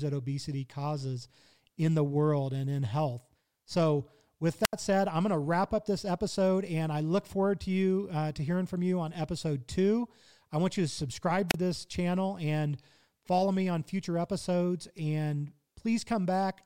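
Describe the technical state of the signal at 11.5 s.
At 11.48 s the analogue FM microphone's radio link fades and the receiver's squelch shuts the output, a wireless microphone squelch dropout lasting until 11.55 s. The speech gives way to a brief swell of hiss, then roughly 33 ms of near silence, before the voice returns.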